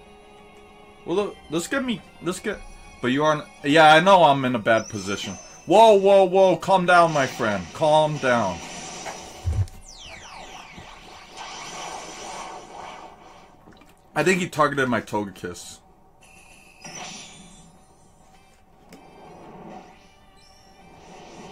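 No faults are audible anywhere in the recording.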